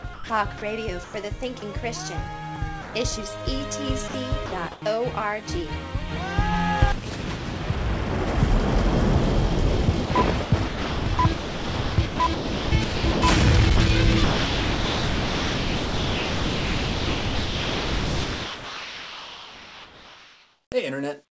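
Sound chopped by the voice detector, 0.14 to 1.62 s: about 320 ms of the sound is replaced by comfort noise as sending likely switches on and off. Sound dropped by the voice detector, 2.82 to 2.94 s: 120 ms of sound gives way to steady comfort noise, likely because the detector mistook it for background, then returns. Sound chopped by the voice detector, 4.08 to 4.82 s: about 220 ms is filled with comfort noise, likely from the detector gating sending in and out. Sound chopped by the voice detector, 10.06 to 13.22 s: 2 s of the stretch is swapped for comfort noise, likely from repeated sending cutoffs, leaving the sound choppy and broken. Sound chopped by the voice detector, 13.76 to 20.72 s: about 6.5 s of this stretch is synthetic comfort noise, likely from the detector repeatedly stopping sending, so only fragments of real sound survive. Throughout, nothing is heard above 8 kHz, which fits the wideband call codec the audio passed through.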